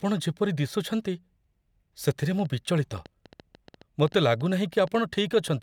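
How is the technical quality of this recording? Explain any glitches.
The recording has one audible fault: a train of clicks running from 2.11 s to 5.49 s. About 7.4 short pulses per second arrive at an uneven pace, roughly thirty in all, each with much the same shape and peaking at about the level of the speech. The likely cause is electrical interference from nearby equipment or a faulty connection or power supply. The clicks are heard as irregular ticking laid over the speech and continuing through the pauses.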